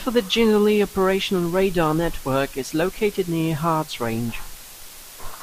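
Speech runs under a constant, even hiss from start to finish, classic low bit depth with dither at 6 bits, leaving the noise only around 20 dB below the speech, with no distortion.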